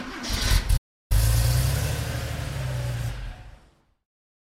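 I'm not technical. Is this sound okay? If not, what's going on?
No. There is a playback stall near the start. At 0.77 seconds the sound suddenly cuts out and goes silent. It stays silent for about a third of a second, until 1.12 seconds, then the sound returns. The gap is not part of the recording. The likely cause is that the player ran short of audio data, or was briefly held up by something else, and had nothing to play until it caught up.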